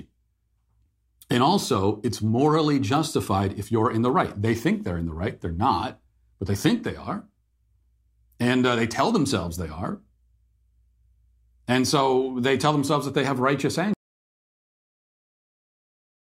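It's a speech recording, and at 13.94 s the sound just drops out to dead silence and never comes back, so the last 2.3 seconds or so, right up to the end, are empty. There's no room tone in that stretch, which is the giveaway for an audio dropout to silence rather than a pause. The likely cause is the input being lost, say a device disconnecting or a mute kicking in, while recording carried on writing silence.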